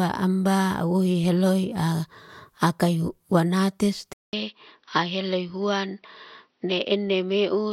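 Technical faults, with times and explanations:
4.13 to 7.72 s: input switched to a poorer device. After a silence of 200 ms at 4.13 s, the speech runs to the end of the clip sounding duller and boxier, with nothing above 5.9 kHz, a level a few decibels lower and faint new background noise well beneath the signal. The system likely changed its input partway through to a narrower-band microphone or headset profile, which brings its own bandwidth, gain and noise floor.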